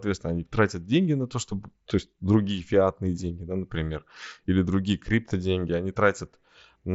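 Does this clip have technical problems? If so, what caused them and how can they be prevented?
No, there is nothing here to fix or prevent: the speech has the band-limited, lightly grainy character of a wideband Bluetooth mSBC headset link topping out around 8 kHz, which is that codec working as designed.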